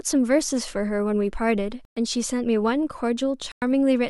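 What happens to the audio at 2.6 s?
Nothing goes wrong at 2.6 s; the audio is intact at that moment.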